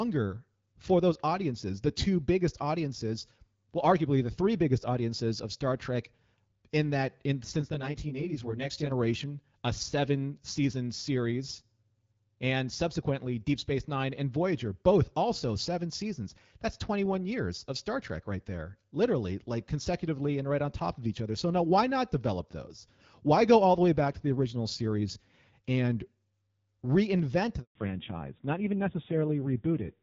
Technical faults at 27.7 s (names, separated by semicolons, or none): handover gap; fallback to narrowband